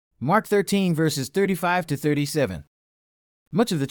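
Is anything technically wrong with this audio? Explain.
Yes. Low bit depth without dither affects the speech from 2.31 s to the end of the clip at 3.90 s. The likely cause is that the signal was rounded to a coarse amplitude grid without dither. The grain sits about 50 dB below the signal, which fits something near 10-bit resolution. With no dither, the rounding error tracks the waveform, so quieter passages take on a gritty, grainy texture that shifts with the sound.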